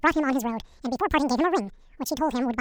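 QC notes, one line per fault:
throughout: audio read two samples at a time (double speed). The reader treats each pair of samples as one frame, as if the stream held two channels or samples twice as wide, so it moves through the data twice as fast as intended. The speech plays at 2x speed and a full octave (12 semitones) high. Dropping every other sample with no filtering folds any strong upper frequencies back down.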